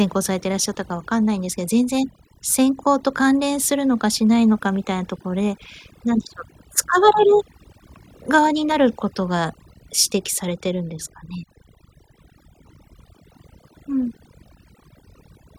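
Throughout the recording, a noise reduction stage set far too aggressively switches off individual frequency bands whenever they sit near its noise estimate, taking quiet speech detail with them. The result is overdone noise removal: near-silent gaps sprinkled with twinkling specks.

From 4.22 to 5.03 s, a block size mismatch (truncated) occurs. One stage writes longer blocks than the next reads, so each block's tail is dropped. This produces a 46.9 Hz buzz, which fits 1024-sample blocks, while the speech keeps its normal speed and pitch.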